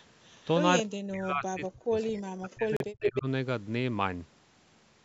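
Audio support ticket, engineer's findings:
Echo leak, 0.00–0.04 s: very faint delayed copy of the speech, 226 ms behind, far below the direct signal. Likely cause: the far end's loudspeaker feeding its microphone, with the echo canceller leaving a residue. On the spectrogram, a weak smear repeating the speech harmonics offset by 226 ms. On the waveform, barely visible. Recurs at 3.03–3.10 s, now 302 ms behind and about as loud as the speech itself. There it shows as a brief second copy of the same harmonic pattern, level with the original.

Speech suppressed in double talk, 0.83–3.26 s: speech repeatedly ducks and drops out in pieces, about two seconds affected in total, deepest dips around 40 dB. Likely cause: the echo canceller's suppressor confusing the talker with loudspeaker echo while both sides spoke, and attenuating both. On the waveform, the envelope is carved into sudden low-level troughs. 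On the spectrogram, the energy fades across the band, up to the 8 kHz ceiling set by the call microphone processing.

Bluetooth stall, 2.77–2.82 s: playback cuts to 37 ms of silence, then resumes. Likely cause: radio interference delaying packets, the headset buffer running dry and audio pausing until retransmissions arrived. On the waveform, a flat silent gap with hard edges on both sides. On the spectrogram, a clean vertical blank stripe across all frequencies, sitting inside the double-talk suppression span.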